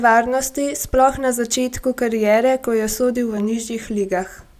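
No technical faults are audible.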